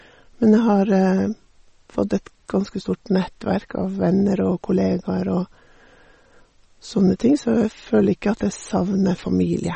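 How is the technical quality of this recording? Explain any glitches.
The recording has audible compression damage throughout. The speech sounds watery and swirly with smeared consonants, and nothing is present above 8.4 kHz. The likely cause is heavy MP3 compression at a low bitrate near 33 kbps, where the encoder cuts the treble and drops weak frequency components.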